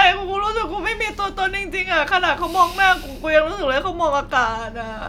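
No technical faults can be heard anywhere in the speech.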